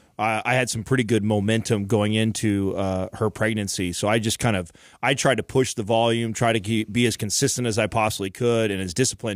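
No technical faults can be heard anywhere in the speech recording; the signal holds steady and continuous throughout.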